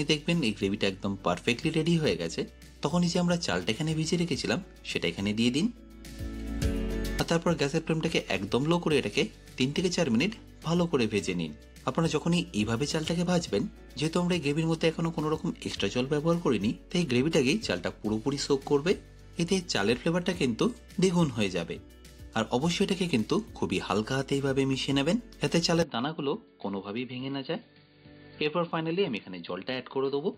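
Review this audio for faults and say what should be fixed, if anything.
At 25.82 s the sound abruptly narrows to nothing above 4.7 kHz, drops a few dB and gains a faint new noise floor through 30.37 s, with no gap at the switch; the input likely switched to a poorer device. The simultaneous shift in level and background noise, not just the bandwidth, distinguishes this from a codec or filter change. Locking the input device for the whole recording would prevent it.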